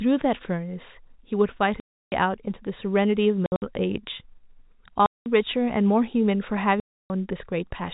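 Packet loss filled with silence cuts dead holes into the speech at 1.8 to 2.12 s, 3.46 to 3.62 s (several short scattered gaps), 5.06 to 5.26 s and 6.8 to 7.1 s. Lost packets were replaced with silence, which fits 20 ms packets. The holes have hard edges.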